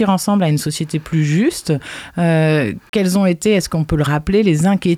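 At 2.89 to 2.93 s the sound drops to silence for about 36 ms, then carries on; that's likely a Bluetooth stall, the headphone buffer running dry while packets were held up.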